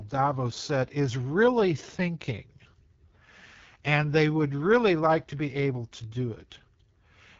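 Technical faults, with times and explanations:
Throughout, AMR wideband (HD Voice) codec: speech sounds rough and raspy, with nothing above about 7.4 kHz. The coder models speech below 6.4 kHz with a pulse-driven vocal tract and fills the top with shaped noise. This damage fits its 8.85 kbit/s rate.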